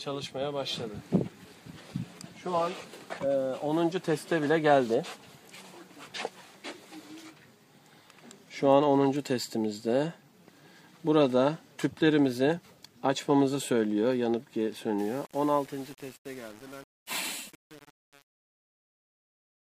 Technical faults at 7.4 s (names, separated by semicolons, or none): none